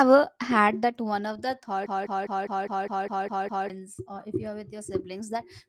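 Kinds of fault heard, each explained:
Broken-record loop: from 1.86 to 3.70 s a piece of sound about 203 ms long repeats exactly, back to back, nine times, and the speech that should have played then is lost. This likely comes from the player or stream stalling and resending its last fragment.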